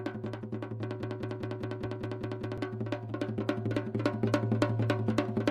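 From 1.03 s to 2.58 s the audio falls into a broken-record loop: a fragment of about 201 ms plays eight times back to back, each repeat identical, with no progress in between. The stutter has a steady rhythm of roughly five repeats per second. Whatever should have sounded during those one and a half seconds never arrives. The likely cause is a player, encoder or stream that stalled and kept resending the last fragment it held.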